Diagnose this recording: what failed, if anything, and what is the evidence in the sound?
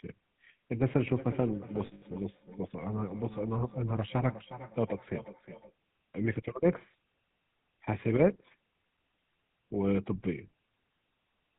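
The speech carries a buzzy, gravelly roughness from start to finish, with nothing audible above 4 kHz, so the top end sounds dull and boxy. This is the GSM full-rate codec at the codec stage. It fits the 13 kbps full-rate scheme, which models the vocal tract with a filter and excites it with a coarse, regularly spaced pulse train. That thinned excitation is what makes the voice grate instead of sounding smooth. The damage is plainly audible.

Between 1.86 and 2.03 s the speech briefly turns into a rough, metallic ringing instead of continuing naturally. This is lost GSM frames, a network or transmission fault. About 140 ms of audio went missing, scattered over 160 ms, with the longest gap roughly 70 ms, which fits several 20 ms frames. For each bad frame the decoder replayed the last good frame's parameters, with the level typically falling from the second lost frame on, which produces the held, tinny sustain.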